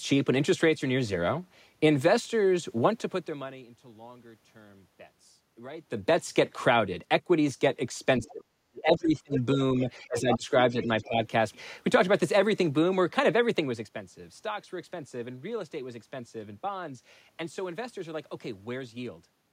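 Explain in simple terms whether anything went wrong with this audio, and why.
Speech suppressed in double talk, between 8.2 and 11.2 s: the voice drops sharply or cuts out for about a second and a half in total. The likely cause is an echo canceller that couldn't separate the talker from the other side when both spoke together, so it turned both down.

Other side's voice leaking through, at 8.23–8.32, 9.34–9.39, 10.18–10.37 and 10.81–11.04 s: scraps of a second voice are audible. They likely come from the loudspeaker echo that the canceller failed to fully remove.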